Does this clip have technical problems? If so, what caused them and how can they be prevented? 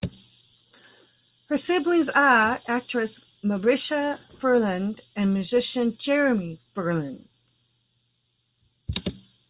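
No, no faults are audible.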